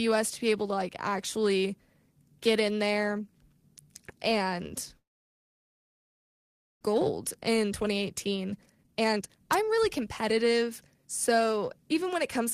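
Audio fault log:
4.97 to 6.85 s, long network dropout: The sound stops and nearly all of this stretch is silence, after only a brief fading continuation of the last sound. The likely cause is that no packets arrived. About one second of audio is lost, and the sound resumes later.
6.93 to 11.54 s, jitter buffer speed-up: The sound runs about 118 percent fast at unchanged pitch and feels hurried. Delayed audio piled up after the gap, so the receiver trimmed many short pitch-period pieces, roughly 0.7 s in total, to reduce the delay.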